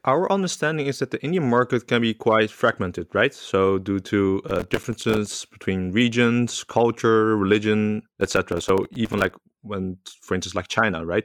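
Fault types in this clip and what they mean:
processor overload crackle: gritty bursts of crackle tear through the speech twice, as the processor misses run after run of short buffers, each leaving a brief silent gap.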